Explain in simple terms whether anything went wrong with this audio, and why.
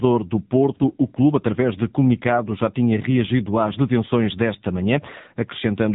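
The speech has passed through the AMR narrowband mobile codec for its full length. Everything above about 3.8 kHz is gone, and heavy compression makes the voice buzzy and synthetic. A plain phone-band filter would sound muffled but natural. This buzz marks a codec.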